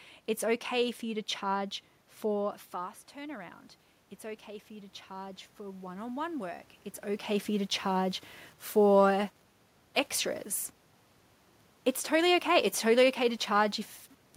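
Speech recording with some room noise under it, and the one real issue is automatic gain rising from 4.21 to 7.33 s. The input dropped by about 12 dB, so the AGC slowly pushed gain up about 4 dB, lifting voice and background together. The level shifts around 2.5 s and 7 s are just the talker moving.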